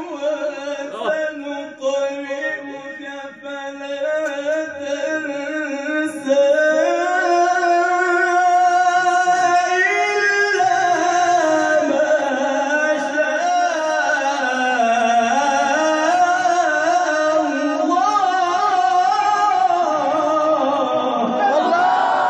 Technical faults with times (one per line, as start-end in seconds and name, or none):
none